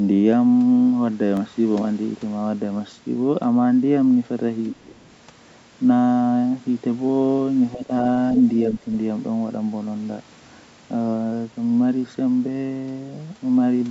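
At 1.37 s a tiny block of digital silence, under a millisecond long, drops the signal out and back, leaving one sharp tick rather than an audible hole. At 4.73 to 4.79 s and again at 5.03 to 5.10 s, a second voice comes through, first clearly and then barely audible. This is likely the other side's voice leaking through because echo cancellation was incomplete. It differs from crosstalk because it is the far side's voice played on the loudspeaker and picked up again by the microphone. Between them, at 4.80 to 4.98 s, the talker's speech is likely suppressed in double talk. It dips steeply while the other side speaks. Two milder dips follow, a moderate one at 7.74 to 7.91 s and a slight one at 8.65 to 8.87 s.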